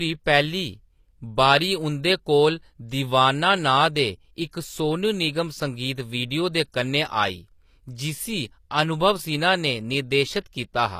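Right through the speech there's gritty, lispy treble with nothing above 15 kHz, likely HE-AAC compression at a low bitrate around 24 kbps, its rebuilt highs not matching the real harmonics. Pre-echo shows up at 4.51 s before "सोनू निगम संगीत वीडियो" and from 6.72 to 6.74 s before "कन्नै आई", where a brief hiss of spread codec noise creeps in ahead of each attack and softens it.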